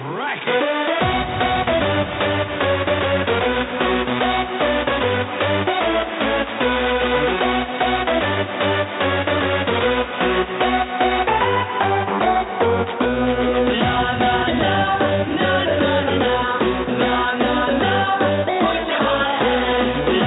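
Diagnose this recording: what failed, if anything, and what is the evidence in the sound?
Nothing failed; no fault is audible in the recording.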